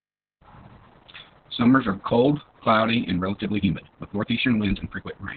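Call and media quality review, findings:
Opus voice compression, whole clip. Narrowband SILK coding: nothing above 4 kHz, speech muffled, hoarse and faintly robotic from coarse excitation coding. The heavy damage points to a very low bitrate, around 6 kbps, with long frames. Component: encoder bitrate setting.

Time-stretched section, 3.15 s to end. Pace jumps to about 1.35x while pitch holds, and the sound turns rushed as short pieces are dropped. Likely a fit-to-length stretch in the editing or playout chain.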